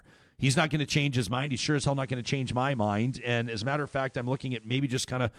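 At 1.27 s the speech shows digital radio blending to analogue: the receiver lost its digital stream and cross-faded over about 278 ms to the FM broadcast. A faint hiss sits well below the speech, with no level change, until 4.86 s.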